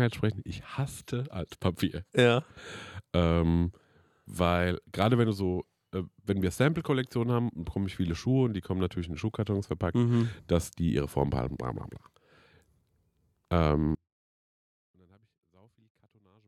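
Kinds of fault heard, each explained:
Audio dropout to a faint residue: from 13.95 s to the end, the speech suddenly drops to a faint leak about 40 dB down, likely a lost feed on a still-live path.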